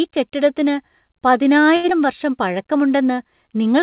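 A speech recording carried over a WebRTC call path, with nothing above 4 kHz, which fits G.711 mu-law narrowband coding. At 1.76 s a packet arrived late and the jitter buffer ran dry, causing a short stall from a late packet. The receiver stretched the last sound for about 76 ms until the data arrived, so through 1.86 s a sound hangs on too long with a slight buzz or dip, though nothing is lost. At 1.90 to 1.93 s comes a short concealed packet loss. About 40 ms of audio never reached the decoder in time, and the receiver also pulled its delay back by a few hundredths of a second. It filled only around 11 ms by extending the preceding sound and then blended back, leaving a brief smear or wobble where a fragment drops out.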